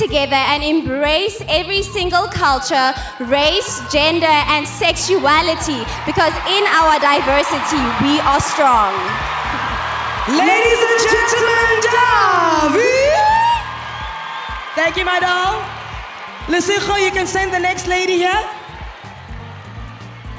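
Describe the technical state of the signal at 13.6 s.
At 13.6 s you're inside a resampler restarted on every block, running from 10.96 s to the end: each 40 ms block is converted from 48 kHz to 16 kHz separately, so the edges tick at 25 Hz, a buzz under the signal.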